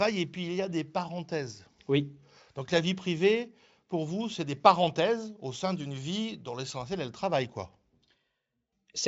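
Nothing in this speech stands out as a technical fault; it's carried over Speex at a comfortable 34 kbps, with the top end simply running out around 7.7 kHz as that setup would have it.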